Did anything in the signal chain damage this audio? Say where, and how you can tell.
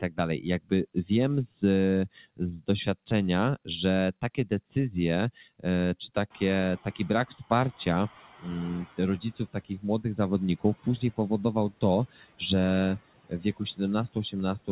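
Yes. The damage happens in call processing. Speech is cut by the noise suppressor at 0.01–1.63, 2.16–2.87, 4.22–4.76, 5.39–7.87, 8.4–12.41 and 13.24–14.69 s. It mistakes quiet speech for noise, so word endings and soft consonants dip about 14–19 dB and look carved out of the waveform envelope.

The noise suppressor is catching up, also in call processing. The room noise jumps at roughly 6.5 s, and the suppressor's estimate lags. From 6.3 s a bright noise band stays on the spectrogram, fading about 11 dB by 8.86 s.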